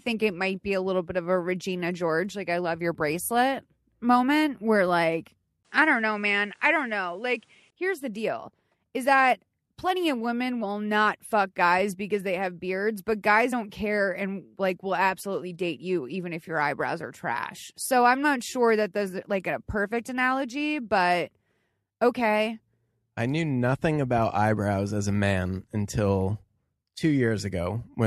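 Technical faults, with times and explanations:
5.63–7.72 s, input switched to a poorer device: after "bracelet moment where like", a 20 ms gap, then the band stops at 11.2 kHz with a fresh noise floor about 40 dB down at similar level, likely a device change. A spectrogram shows a flat top edge until "here's the deal is".
13.52 s, compressed frames skipped: just after "have beards but guys", roughly two 23.2 ms frames, around 50 ms, drop out. The audio jumps ahead by that length where the frames are left out.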